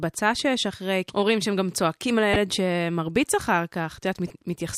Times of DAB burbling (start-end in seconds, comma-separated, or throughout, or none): 0.73-0.76, 2.33-2.38, 4.28-4.34